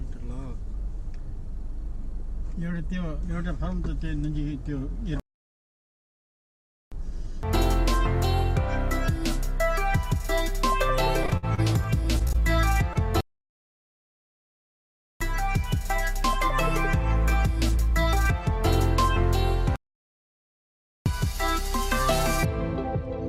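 The audio has three kinds of transport fault. Three playback stalls cut the sound off in mid-flow, leaving silence from 5.20 to 6.92 s (about 1.7 s), 13.21 to 15.21 s (2.0 s) and 19.76 to 21.06 s (about 1.3 s), after which the sound resumes. The likely cause is the player running out of buffered data, or its output thread being blocked, so nothing was delivered until it recovered. From 11.23 to 12.36 s there is repeated packet loss, giving a robotic, choppy sound. The stretch is broken by what sounds like nine separate holes, the longest about 57 ms, with roughly 15% of the span patched over. Each hole is bridged by extending the preceding sound, and the next dropout arrives before the audio settles. This gives the stretch its chopped, synthetic character, with small pieces missing. Just after that, from 12.93 to 12.97 s, a short concealed packet loss leaves a brief smear. Around 20 ms of audio did not reach the decoder in time, and the receiver filled it by continuing the last sound before blending back into the real signal. 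It is heard as a momentary wobble rather than a gap.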